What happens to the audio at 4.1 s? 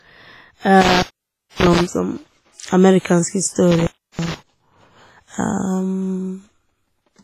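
The speech breaks up with crackle at the edges, opening for about 0.32 s within a disturbance from 3.71 to 4.34 s, an intermittent contact where a loose cable or plug briefly loses connection. Throughout, including here, the sound is ringing and washy with breathing hiss and nothing above 15.4 kHz, heavy damage likely from WMA compression at a low bitrate around 24 kbps.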